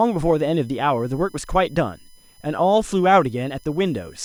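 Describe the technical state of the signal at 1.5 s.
USB whine at 1.5 s, present throughout: 1 ms bus frames leak through power or ground, giving a fixed 1 kHz tone series loudest at 5 kHz, roughly 35 dB under the speech.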